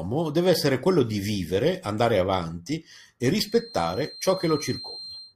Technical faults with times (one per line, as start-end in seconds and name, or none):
3.36-5.36 feedback whistle